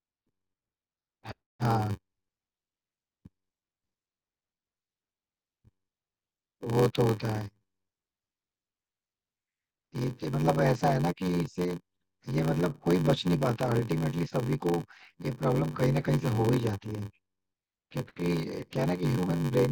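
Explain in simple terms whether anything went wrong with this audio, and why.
Block size mismatch (padded) runs through the whole speech clip, from start to finish. One step in the audio chain passes along smaller chunks of sound than the next step expects, which fits blocks of 512 samples, and the missing part of each chunk is filled with silence. Those tiny silent gaps repeat about 94 times a second, producing a steady buzz under the voice. The extra gaps also stretch everything, so the speech plays at about 0.86 times its normal speed while the character of the voice stays the same.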